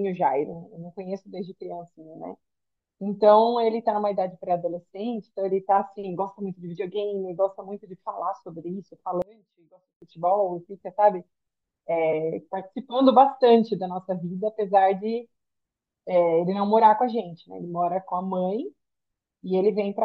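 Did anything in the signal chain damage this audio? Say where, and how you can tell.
Yes. From 9.22 to 10.02 s the speech and background drop by about 28 dB to a faint residue, not silence, so one channel inverted before the mono sum is likely.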